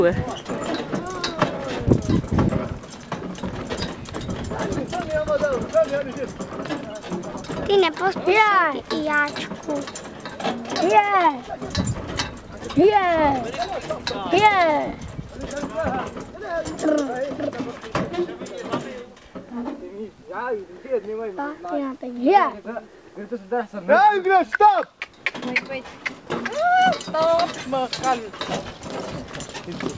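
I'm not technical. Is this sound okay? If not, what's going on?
Yes, nothing stood out as a problem on listening; it sounds like ordinary audio that came through a call connection, which trims off the very highest tones above about 8 kHz.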